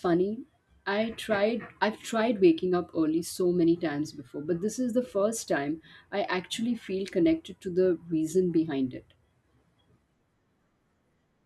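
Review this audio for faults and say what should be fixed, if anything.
Nothing needs fixing here, since no faults turn up anywhere in the recording.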